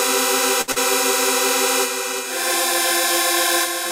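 A short sound recording with two closely spaced network faults early on. From 0.61 to 0.70 s the sound briefly hangs, held about 64 ms longer than it should be with a faint buzz or dip, then carries on from exactly where it stopped. That is a short stall from a late packet: the jitter buffer ran dry, so the receiver kept extending the last sound until the packet showed up. Nothing is lost, but everything after it plays about 64 ms later. Right after, from 0.72 to 0.78 s, there is a brief smear or wobble where about 40 ms of real audio is simply gone and replaced by a synthetic continuation that blends back into the recording. That is short concealed packet loss: the data never reached the decoder in time, and the receiver filled the hole by extrapolating the preceding sound rather than leaving silence.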